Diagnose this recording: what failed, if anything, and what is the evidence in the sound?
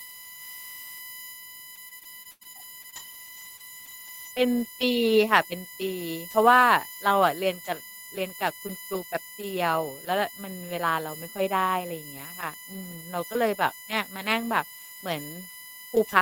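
A USB whine runs through the entire speech recording, entering in the analogue wiring through shared power or ground. Its fixed pitch sits at a 1 kHz fundamental, with the strongest component at the 14th multiple, 14 kHz, roughly 15 dB below the speech. That spacing is the bus's 1 ms frame rhythm leaking in as supply current. On a spectrogram it appears as thin, perfectly horizontal lines at 1 kHz intervals, unbroken through the pauses between speech.

Repeated packet loss (robotic sound) affects the span from 1.75 s to 4.39 s, a network-stage fault. About a dozen holes open there, the longest 100 ms, with roughly 320 ms of audio missing in total. The receiver patched nearly all of it by extending the last good sound, about a fifth of a second of rebuilt material, which gives the choppy quality. A spectrogram shows frozen, repeated harmonic slices with sharp vertical seams, and the waveform shows cyclic stretches and abrupt joins.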